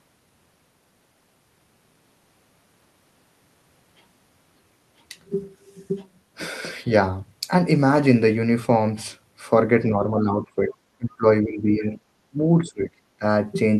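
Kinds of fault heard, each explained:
Speech suppressed in double talk: at 9.89–10.81, 10.98–11.25, 11.43–11.98, 12.30–12.39, 12.59–12.99 and 13.19–13.23 s the speech repeatedly sinks in level, by about 10 dB at the mildest and around 25 dB at the deepest, so the last four seconds come through chopped into pieces. This is likely an echo canceller that, with both ends talking at once, could not tell the near talker from loudspeaker echo and turned everything down together.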